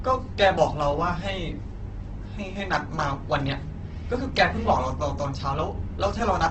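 Speech runs the whole clip with Opus compression damage. Nothing sounds above 8.2 kHz, so it is dull. Voiced sounds turn rough, grainy and noisy, likely from Opus in its music mode filling starved bands with folded or noise energy, which fits a bitrate near 12 kbps.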